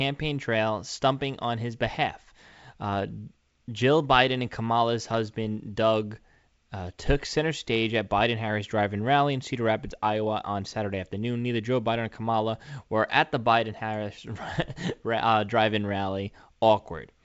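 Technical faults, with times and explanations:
The speech carries the band limit of G.722 wideband telephone coding, with nothing above about 7.7 kHz and at most faint coding hiss, which fits the codec's full 64 kbit/s mode working as intended.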